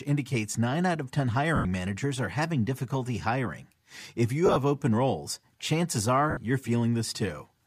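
Lost LE Audio frames break up this speech clip at 1.56–1.65 s, 4.46–4.56 s and 6.30–6.37 s. The LC3 decoder fills each gap with the last spectrum under random signs, leaving a brief noisy smear. The middle dropout is scattered, with the longest run about 30 ms.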